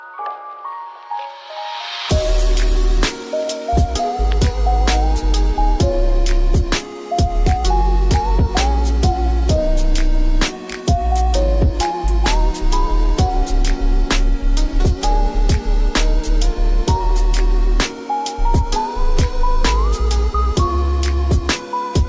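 No audible technical faults anywhere in the recording; nothing to flag.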